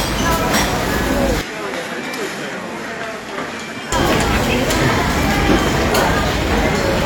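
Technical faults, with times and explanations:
1.41–3.92 s, input switched to a poorer device: the sound abruptly turns duller and drops roughly 10 dB in level, with nothing above 12.2 kHz and a faint new background noise about 40 dB under the signal. It switches in and back out with no silence, most likely because capture moved briefly to another microphone. A plain filter or gain change would not also bring its own noise floor and tone, which revert together at 3.92 s.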